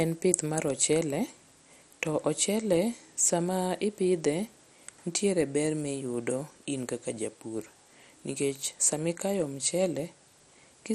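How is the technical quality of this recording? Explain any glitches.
The quality is limited by lossy compression throughout the speech. From start to finish it sounds dull and gurgling, with a grainy roughness. This is likely MP2 compression at a low bitrate, which fits about 64 kbps. Layer II divides the spectrum into 32 sub-bands and starves the upper ones of bits, so they drop out or flicker while the rest are coarsely quantised. A spectrogram shows a hard ceiling at 14.4 kHz and patchy, blinking high bands beneath it.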